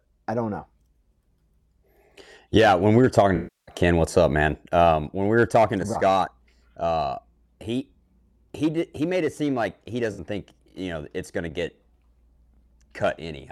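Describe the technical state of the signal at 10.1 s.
Right at 10.1 s there's an AAC frame loss with concealment, running from about 10.12 to 10.20 s, between "it seem like he" and "think you know it's". Around 64 ms of the stream went missing, which fits about three AAC frames. The decoder patched the hole by rebuilding it from the last good spectrum, so you get a brief smeared, phasey stretch instead of a dropout. It's too short to fade toward silence.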